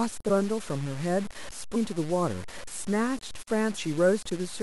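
From start to finish the speech carries a grainy, rasping distortion that rises and falls with the sound. Quiet tails break into sputter or drop straight to silence. This points to low bit depth without dither, likely truncation to around 5 bits, leaving the error only about 20 dB below the signal. On a waveform, low-level passages show coarse staircase steps. On a spectrogram, broadband hash tracks each syllable and vanishes in gaps instead of forming a steady noise floor.

At 1.74 s the audio jumps forward by roughly 300 ms. Compressed frames were skipped, about fifteen of them. The 23.2 ms spacing fits 1024-sample frames at 44.1 kHz. The same skip recurs at 3.76 s. A spectrogram shows an abrupt content change at each seam, and the waveform envelope jumps discontinuously there.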